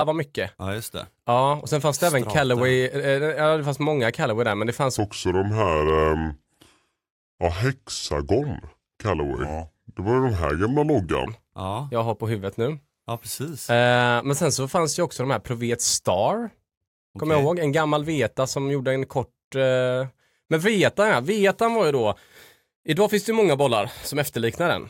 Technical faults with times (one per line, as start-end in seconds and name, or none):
4.98-11.27 section at the wrong speed